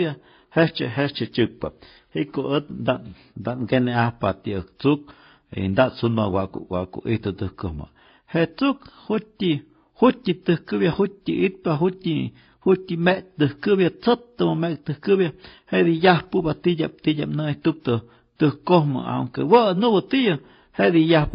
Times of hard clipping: 18.73, 19.54-19.57

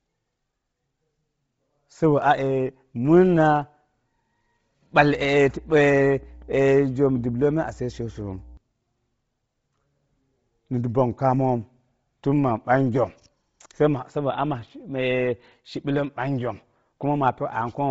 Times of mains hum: 4.97-8.57

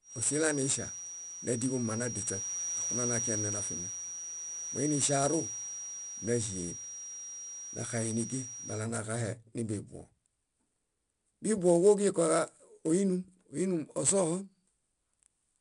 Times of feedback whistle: 0.00-8.89

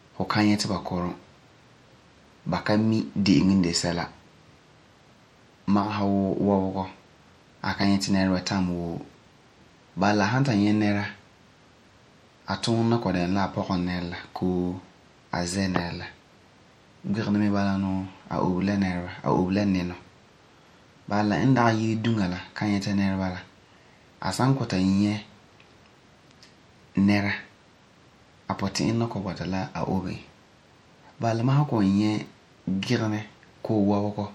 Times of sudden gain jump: none

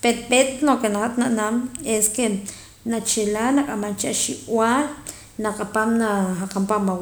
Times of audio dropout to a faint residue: none

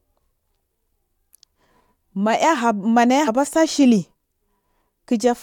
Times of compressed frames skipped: 1.31, 3.27

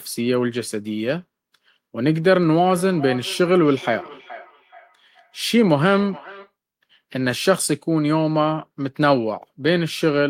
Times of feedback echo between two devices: 2.57-6.54

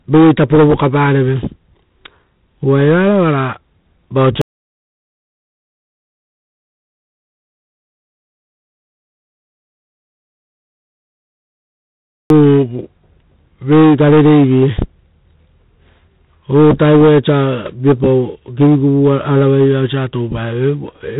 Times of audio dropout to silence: 4.41-12.30

